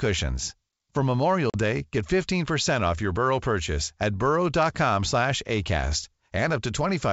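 At 1.50 s the speech drops into a hard-edged silent hole until about 1.56 s: packet loss on an ADPCM call, roughly a couple of packets gone, about 40 ms in all. Because the decoder's predictor and step size lost track of the sender's, the speech comes back with a moment of slight distortion before settling.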